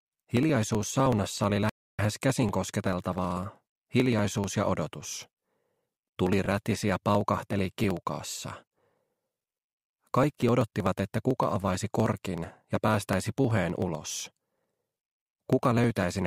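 From 0.05 s right through to 16.22 s there's a steady tick every 63 ms, about sixteen a second, which points to periodic USB or driver dropouts. Something keeps blocking the bus or driver on a fixed schedule, and each time roughly a millisecond of audio just gets skipped, so the sound jumps slightly and you hear it as a regular tick whenever there's signal.

At 1.70 s everything drops to silence for 293 ms and then carries on at 1.99 s. That looks like a Bluetooth stall, likely from interference holding packets up until the headphones' buffer ran empty and playback had to wait for the resent data.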